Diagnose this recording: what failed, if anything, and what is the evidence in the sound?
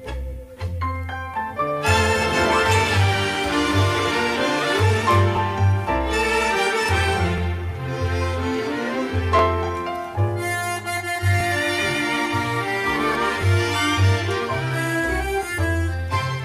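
A short click or stutter recurs at 1.34, 3.35, 5.37, 7.38, 9.39, 11.40, 13.42 and 15.43 s, spaced 2 s apart. These are overlapping chunks at the buffer stage. Each 2 s block starts 13 ms before the previous one ends, so that sliver plays twice at every join.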